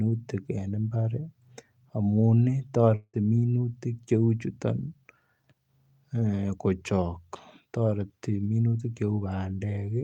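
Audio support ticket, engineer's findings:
Speech breaks up from 2.95 to 3.16 s. The last sound stretches into a fading buzz for 180 ms, then 40 ms of silence. Speech resumes with 180 ms lost. Likely a long network dropout: receiver concealment ran out.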